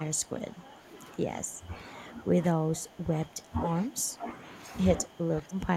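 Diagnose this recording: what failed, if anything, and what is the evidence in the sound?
Call processing: speech suppressed in double talk, dipping roughly 15 dB from 0 to 4.46 s and about 20 dB from 4.96 to 5.76 s, likely an echo canceller ducking during double talk.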